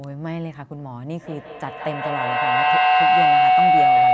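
From 1.19 s to the end, a loop between two devices sharing the room kept gaining level. That feedback howl rose to about 13 dB above the speech near 700 Hz, pulsing roughly every 150 ms.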